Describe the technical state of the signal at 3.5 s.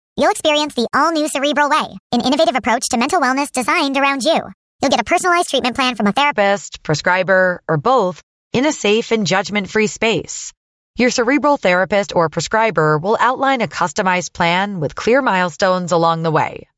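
You're inside a wrong sample rate stretch at that point. It runs from the start of the clip to about 6.33 s and clears just before "prescriber or both in". The speech is playing 1.38 times too fast and roughly 5.5 semitones sharp, so it sounds high, hurried and a bit chipmunky. Speed and pitch rise together because nothing resampled the audio. The ratio fits 16 kHz material being played out at 22 kHz.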